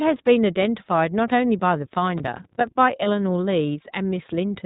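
Across the whole speech clip the iLBC codec is plainly audible. Nothing above 4 kHz survives, so the voice has a narrowband, boxy quality, and the speech is clear but slightly rough and synthetic. Each frame's excitation is coded on its own rather than predicted from the previous one. The character fits iLBC's 20 ms frame mode at about 15.2 kbps.

From 2.08 to 2.68 s there is processor overload crackle. For about 0.6 s the processing could not finish its audio buffers on time. The sound points to buffers of roughly 5 ms, with something like twenty deadlines missed in close succession. Each missed buffer came out as a short silence with hard edges. Together these dropouts form a gritty, tearing crackle laid over the speech, and it stops cleanly once the load clears.

At 3.04 to 3.07 s there are lost iLBC frames, a gap of about 20 ms, the length of a single frame. The decoder fills it by repeating the last pitch cycle blended with noise. 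The result is a brief held, slightly buzzy vowel-like sound in place of the missing audio. Because iLBC frames do not depend on one another, the speech returns to normal immediately after the gap.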